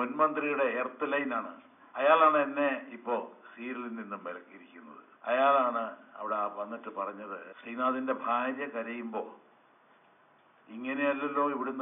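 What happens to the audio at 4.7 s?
Nothing goes wrong at 4.7 s; the audio plays through that moment intact, with no dropout, click or other fault.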